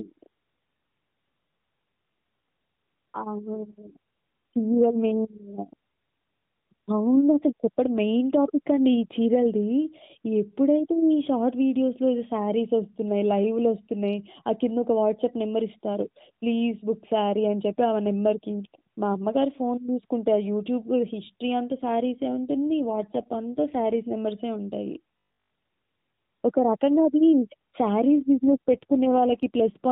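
From 21.72 to 24.16 s an AMR rate drop occurs: the mobile link falls back from full rate, consistent with 12.2 dropping to 5.9 kbps. The speech turns rougher and more synthetic within the same narrow band, without any gap. From 25.19 to 25.53 s comes robotic sound from repeated short buffers: a rigid, metallic 50 Hz buzz that loosely tracks the speech. This is likely caused by roughly 20 ms chunks being replayed for most of that stretch. The same AMR rate drop returns from 28.12 to 29.90 s, and the speech again goes coarse and synthetic.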